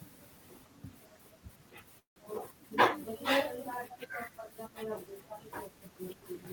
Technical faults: call audio freeze

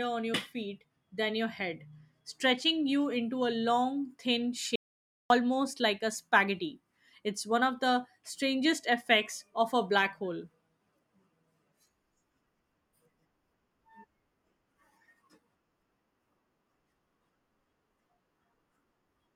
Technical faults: audio dropout to silence

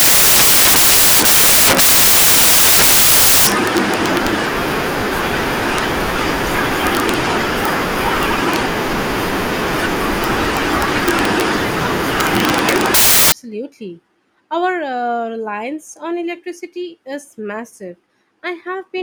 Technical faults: samples built from the wrong bytes

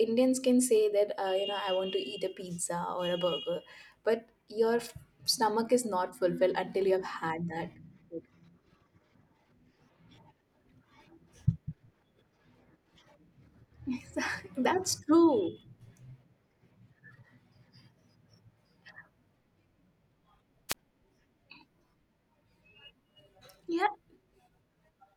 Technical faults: wireless microphone squelch dropout

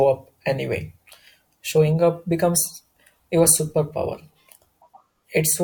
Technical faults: none

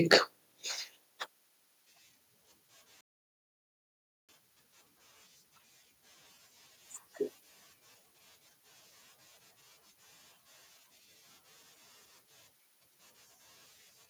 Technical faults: microphone overload

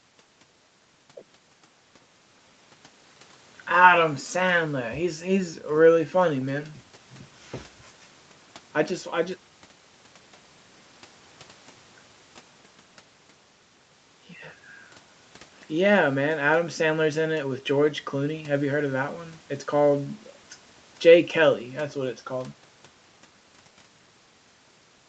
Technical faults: none

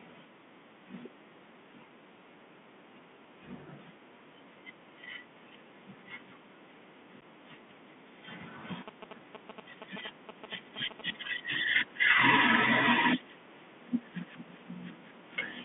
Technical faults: Bluetooth CVSD headset codec; unconcealed Bluetooth headset packet loss; GSM signalling bursts

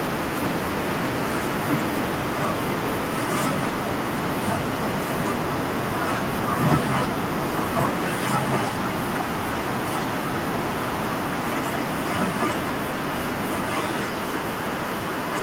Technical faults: none

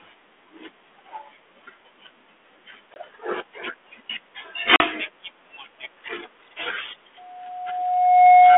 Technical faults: packet loss on an ADPCM call; loudspeaker feedback squeal

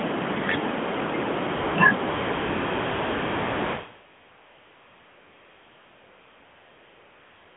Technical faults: AMR comfort noise

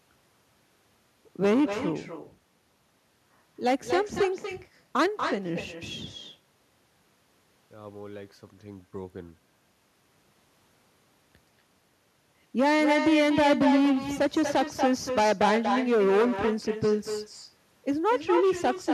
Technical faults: echo with no canceller

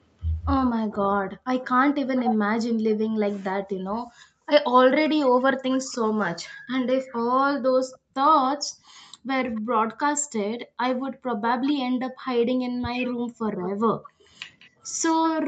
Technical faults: speech suppressed in double talk; background gated by the echo canceller; echo leak

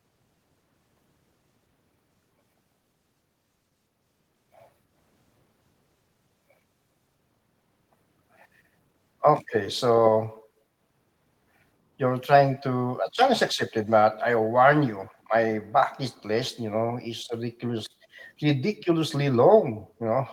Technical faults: echo leak

